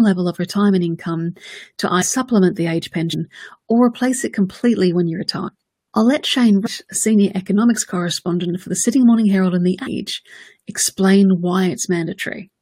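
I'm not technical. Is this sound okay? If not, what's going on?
No. At 2.01, 3.12, 5.47, 6.65 and 9.86 s the speech briefly jumps ahead, dropping a fraction of a second, most at 6.65 s. These are compressed frames skipped: missing or damaged chunks of the file weren't played.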